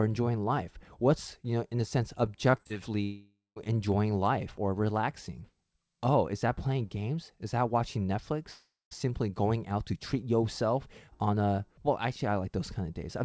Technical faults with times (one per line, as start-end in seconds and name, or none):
2.52-2.77 repeated packet loss (robotic sound)
3.03-3.58 long network dropout
3.92 dropped samples
8.51-8.93 long network dropout